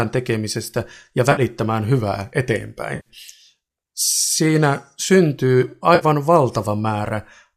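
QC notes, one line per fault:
1.32–1.41 s (after "tekemisestä ja"), 2.96–3.09 s, 5.95–6.05 s: AAC frame loss with concealment. About 50, 100 and 60 ms of audio go missing, and the decoder patches each gap from the last good spectrum. The result is a smeared, noisy, phasey blur rather than the hard silence of a true dropout. The roughly 10 ms granularity of the gaps likely reflects the low-delay AAC stream's short frames.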